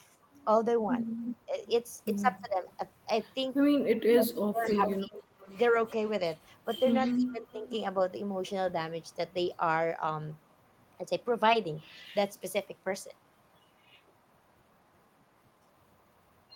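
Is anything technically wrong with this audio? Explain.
Yes, the speech contains two kinds of call-path fault.

Echo leak occurs from 1.23 to 2.76 s, 4.64 to 10.96 s and 13.02 to 13.56 s. A delayed copy of the speech trails it by 299 ms in the first stretch and 348 ms in the later two. It is about 10 dB below the speech at first, roughly 15 dB down in the middle stretch, and roughly 40 dB down at the end. The likely cause is a far-end loudspeaker whose echo canceller let part of its microphone pickup return.

Speech suppressed in double talk occurs from 1.46 to 5.15 s and from 7.16 to 7.68 s. The talker's level dips in pieces, by as much as roughly 20 dB in the first span (about a second in total) and roughly 15 dB in the second (about half a second). This is likely an echo canceller that could not separate the overlapping talkers and attenuated both.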